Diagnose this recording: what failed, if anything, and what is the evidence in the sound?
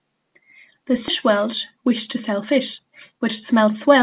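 At 1.08 to 1.1 s the speech lurches forward with no gap: roughly 0.4 s of sound is simply missing, and the two sides are butted together with nothing filled in. This is a skip ahead at the network and jitter-buffer stage. Audio that arrived late or piled up was discarded while later audio was already waiting, so playback jumped ahead and the delay dropped by around 0.4 s in one step.

From 1.3 to 3.88 s the speech sounds slightly hurried, running about 106% of normal speed while its pitch stays put. This is a jitter buffer speed-up. The buffer was holding more audio than its target, so the receiver repeatedly cut out short slices, each one or a few pitch periods long, and removed something like 150 ms in total to pull the delay down. The 4 kHz band limit heard throughout fits the G.711 mu-law call codec.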